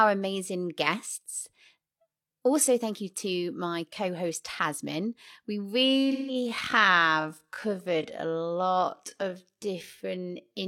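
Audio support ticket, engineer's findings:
Time-stretched section, 5.75 s to end of clip. Pacing drops abruptly to 0.575x speed with pitch unchanged. Slowed speech drags through to the end. Likely cause: software stretching to fit a target length, with short segments repeated to hold pitch.

AAC frame loss with concealment, 6.11 to 6.35 s, inside the stretched region. Brief smeared, noisy or phasey patch, about 0.17 s of lost signal, consistent with roughly four dropped AAC frames. Decoder filled the gap from the last good spectrum with scrambled signs or interpolated energy. The gap is too short to decay into silence.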